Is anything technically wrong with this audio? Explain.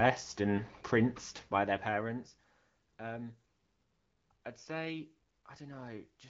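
No, nothing is technically wrong with this audio.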